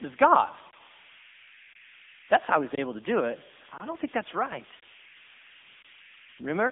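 From start to finish a whistle sits near 2 kHz, heard in the pauses and as graininess under the speech, about 18 dB below the signal. These are converter idle tones: an undithered delta-sigma converter locks into repeating bit patterns when its input is small.

Throughout, the speech also sounds plainly buzzy and synthetic, confined to a telephone band of roughly 200 Hz to 3.6 kHz with nothing above about 3.7 kHz. This is the AMR narrowband mobile codec, and the degree of damage fits its 7.95 kbps mode.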